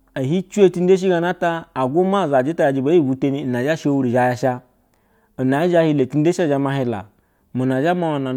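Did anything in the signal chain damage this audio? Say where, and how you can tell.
No, nothing in the signal chain damaged this audio.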